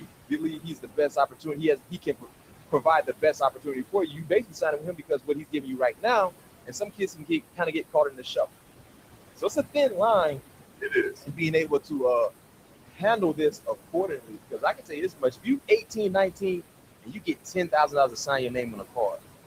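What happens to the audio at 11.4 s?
At 11.4 s the noise suppressor is mistaking part of the speech for noise, within a span from 9.37 to 12.31 s. It pulls those parts down by up to about 17 dB, about a second in all, so soft consonants and word endings sound swallowed or faint.

Throughout the clip, including this moment, the same suppressor is pushing the room noise down by about 21 dB, band by band and frame by frame. The room noise, sitting about 10 dB below the speech, sinks in pauses and rises under speech.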